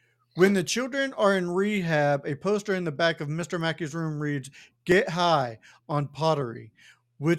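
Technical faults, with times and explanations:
3.42 to 6.92 s, periodic USB or driver dropouts: something repeatedly stalls the USB bus or audio driver about every 0.5 s, skipping a tiny slice of speech, around half a millisecond, each time. The joins leave regular ticks, roughly seven across this stretch.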